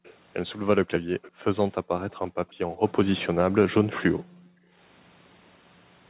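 Speech, carrying two kinds of fault. Faint delayed copies of the voice turn up at 0.04 to 0.13 s and again at 1.22 to 1.31 s, each trailing the original by about 0.4 s and sitting roughly 25 to 30 dB below the speech. This is likely an echo leak: a loudspeaker on the far side replayed the call, and its echo canceller let part of what its microphone heard slip back. What separates it from room reverberation is the discrete copy at a fixed delay, rather than a smeared tail that decays off each syllable. The second fault is background gated by the echo canceller. The room sound falls away, by as much as about 40 dB, from 0.79 to 1.49 s, 1.82 to 2.08 s, 2.31 to 2.69 s and 3.37 to 4.78 s, then returns. The canceller was clamping the microphone while the loudspeaker played. Unlike a packet dropout, the gaps are in the ambience and come back when the canceller lets go, and unlike steady noise suppression they switch on and off with playback. 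All of this sits within the narrow telephone band, with nothing above 4 kHz from the G.711 path.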